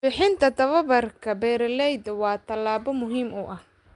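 Across the whole clip, the speech carries a rough, hissy halo and a smeared, underwater character, and nothing is heard above about 10.6 kHz. This is plainly audible codec damage, likely from Nellymoser Asao compression, the old Flash microphone codec. It codes short blocks at a fixed, very low bit depth, so weaker bands receive no bits and are filled with noise. The grit and the band limit fit a stream of roughly 44 kbps.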